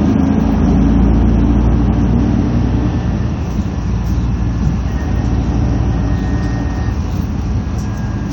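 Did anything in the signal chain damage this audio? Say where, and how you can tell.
No, nothing in the signal chain has damaged this recording of sounds. No stage from capture through to playback has left any mark on it.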